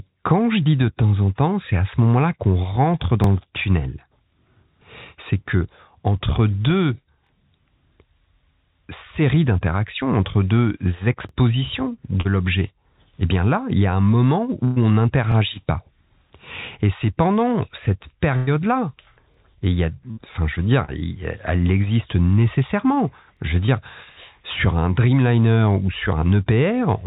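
At 0.64 s, just before "de temps en temps", a short concealed packet loss leaves a brief smear. About 20 ms of audio never arrived, and the receiver extended the preceding sound to fill it. On a spectrogram this shows as a brief stretch of smoothed, continued sound, and the waveform has no hard gap.

At 3.24 s the first overlapping chunks join is heard as a small stutter. The audio was handled in 4 s chunks, each beginning 25 ms before the previous one finished, so that 25 ms plays twice. The same joins recur at 7.27 s (after "que entre deux"), 11.29, 15.32, 19.34 and 23.37 s. Each appears as a duplicated waveform fragment with a discontinuity at the seam, evenly spaced in time.

More short concealments follow at 12.21 s, where about 40 ms is lost, and at 20.85 s, between "enfin je veux dire" and "elle existe nécessairement". At 14.65 s, a burst of packet loss removes about 120 ms. The missing span is filled by a held, fading continuation of the last sound and then jumps forward, so material is skipped. 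On the spectrogram this looks like frozen harmonics or hiss thinning out, followed by an abrupt resumption. Similar bursts occur at 18.37 s (about 100 ms) and 20.11 s (about 60 ms), and a final short concealment falls at 23.66 s.

Throughout, nothing appears above 4 kHz, which fits a 64 kbit/s G.711 mu-law call path.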